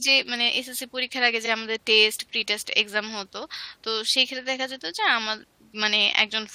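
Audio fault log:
1.45–1.48 s, repeated frames: a 23.2 ms slice of the speech plays twice in a row, which points to a single compressed frame being sent again. It comes across as a tiny stutter, and the clip runs 23.2 ms longer because of it.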